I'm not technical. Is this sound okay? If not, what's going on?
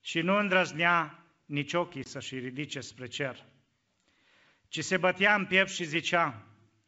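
No. Packet loss on an ADPCM call is audible from 2.04 to 2.09 s, right after "nu îndrăznea nici ochii" and before "ridice spre cer". A couple of chunks of the call, about 20 milliseconds of speech, never arrived and were replaced by silence, leaving a sharp-edged hole. The phone's decoder then lost track of the sender's settings, so the speech comes back slightly distorted, settling within a few tens of milliseconds. The wideband phone coding itself sounds clear.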